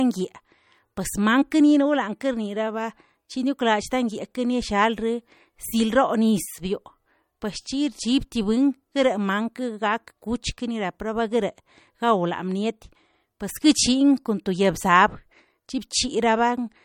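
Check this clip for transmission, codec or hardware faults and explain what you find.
One fault runs through the whole recording: MP3 compression, likely at a low bitrate. The speech sounds like it passed through an encoder starved of bits, a damage level consistent with roughly 48 kbps. With too few bits, the encoder drops weak spectral components and lets others flicker between frames. The result is a plainly audible watery, swirling texture with metallic edges on sibilants and softened consonant attacks. Nothing survives above 18 kHz, where the encoder cut the treble.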